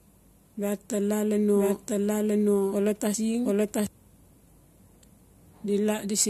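From 1.54 s to 3.87 s the speech runs as a doubled audio track. A second full-band copy sits about a second behind the original and at roughly the same level, so the clip sounds like two overlapping takes. It differs from a room echo: the copy has no decay tail and no reverberant colour, and it starts and stops abruptly at the edges of that span. The likely cause is the same signal being captured a second time over a slower path.

At 3.14 s, inside the doubled stretch, compressed frames are skipped. The speech jumps forward by about a third of a second, with a brief glitch at the join. That step fits a whole number of frames of about 21 ms. Unlike a dropout, there is no silent gap.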